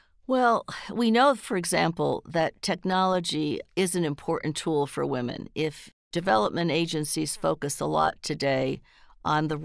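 No technical faults can be heard anywhere in this recording.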